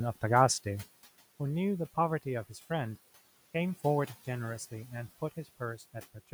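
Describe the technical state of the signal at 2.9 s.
At 2.9 s, as throughout the speech, a noise suppressor is cutting bands it judges to be steady noise by about 15 dB, frame by frame. The room noise, about 20 dB below the speech, sinks in pauses and swells under speech.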